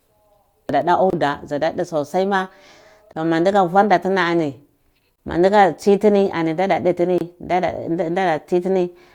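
Gaps at joins of encoded pieces open at 1.10, 3.13, 5.16 and 7.18 s, recurring every 2.0 s. The speech was encoded in separate pieces and butted together untrimmed, so each join keeps the encoder's start-up delay plus the padded final frame of the piece before it. The result is a 27.4 ms dropout at the first join and 26.7 ms at the others: a brief hole with smeared edges, after which the speech resumes exactly where it stopped.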